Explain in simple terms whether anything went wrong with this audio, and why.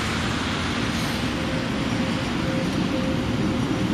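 Nothing went wrong here; there's no glitch, dropout or other technical hiccup to point to anywhere in the recording.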